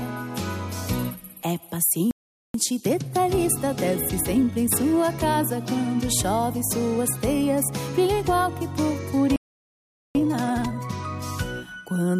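At 2.11 s the audio cuts out for about 0.43 s, a playback stall likely caused by the player running short of data, showing as a flat gap in the waveform and a blank column on the spectrogram. From 2.54 to 5.54 s a time-compressed catch-up runs at 1.1 times speed, so the sound is slightly hurried at normal pitch. The spectrogram keeps its frequency bands level, but events sit closer together. A second stall at 9.36 s silences the output for about 0.79 s. Then a much steeper catch-up at 2.0 times speed runs from 10.15 to 10.93 s, which sounds rushed as the spliced pieces crowd together.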